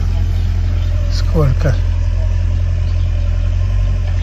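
No technical faults can be heard in this audio.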